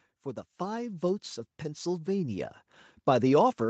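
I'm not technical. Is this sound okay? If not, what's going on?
No. From about 0.57 to 2.6 seconds the speech gets steadily louder. This is automatic gain rising: the call's level control judged the input too quiet and turned it up. It isn't the talker speaking louder, because the background noise swells along with the voice.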